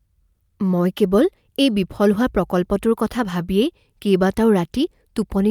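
Nothing in this speech recording points to a technical fault at any point in the signal.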